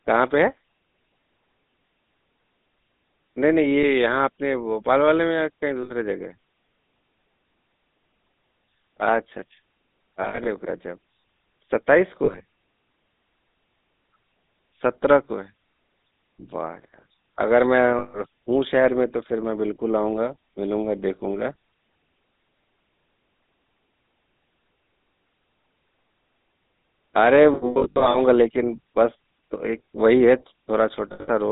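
Speech, carried throughout by the GSM full-rate codec, with audible codec damage. The line is limited to roughly 200 Hz to 3.7 kHz, and the voice has a gravelly, buzzy texture. That texture comes from the codec rebuilding the voice by driving a vocal-tract filter with a sparse, regularly spaced pulse train instead of the real excitation, which fits a 13 kbps full-rate GSM codec. Lost GSM frames occur at 3.83 s, 5.83 to 5.91 s, 10.22 to 10.48 s, 12.24 to 12.42 s, 17.98 to 18.19 s, 27.54 to 28.17 s and 31.12 to 31.29 s. At each one the decoder repeats the last good frame, so the sound freezes into a short metallic ring. The longest is the 27.54 s event, where losses scattered over 0.6 s include a continuous run of about a tenth of a second.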